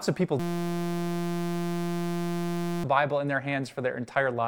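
Speech, and right after "of people" at 0.40 s it locks into a system hang loop that runs until 2.84 s. Something froze while the audio hardware kept replaying the same tiny ring buffer: a 5.8 ms slice repeating over and over, which fits a 256-sample buffer. Because the loop is so short, you don't hear a stutter but a steady buzz at about 172 Hz, and around two seconds of the real speech is simply gone.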